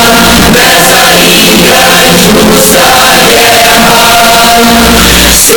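Float read as integer runs throughout: the audio is a harsh, near-square roar at an almost fixed, high level, likely because 32-bit float samples were read as 32-bit integers.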